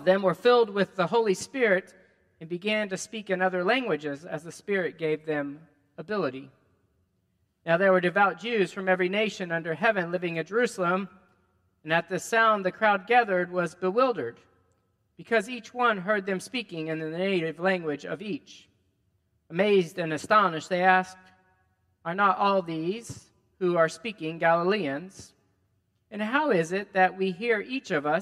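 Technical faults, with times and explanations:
No technical faults are audible.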